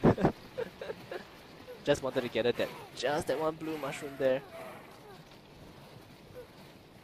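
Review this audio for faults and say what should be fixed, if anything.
Two spots where chunks come out of order: around 1.95 to 1.99 s, and again at 5.02 to 5.04 s. Each block is about 11.6 ms, which fits a 512-sample buffer at 44.1 kHz. A block gets delivered late, roughly two blocks behind at the first spot and one at the second, so it plays after material that should follow it. You hear a brief jumbled smear at the hard joins. Prevent it by sequencing buffers and reordering on arrival before they're written out.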